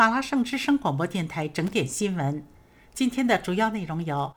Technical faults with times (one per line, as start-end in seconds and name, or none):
1.67-1.73 loose connector crackle